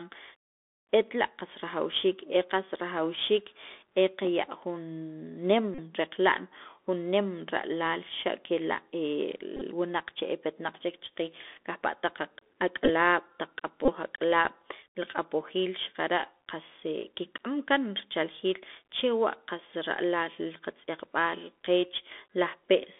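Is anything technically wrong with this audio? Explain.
Yes. The speech carries two distinct faults.

Throughout, the Bluetooth CVSD headset codec limits the sound. Its one-bit delta coding, consistent with the 64 kbps CVSD stream, lets through only about 250 Hz to 3.6 kHz, and its damage is plainly audible: scratchy sibilants and a granular hiss. A spectrogram shows a hard ceiling near 3.6 kHz with grainy noise filling the band.

Bluetooth headset packet repeats occur at 5.75–5.80 s, 9.57–9.62 s, 12.85–12.90 s and 13.85–13.93 s. When packets drop, the decoder replays the previous packet's bits, producing a brief buzz near 267 Hz. The loss at 5.75 s spans about 37.5 ms, consistent with ten lost 3.75 ms packets. At 9.57 s and 12.85 s the losses are scattered over 45 ms, with runs around 15 ms. On the waveform these appear as a waveshape repeating every 3.75 ms, and on the spectrogram as a comb of lines spaced 267 Hz apart.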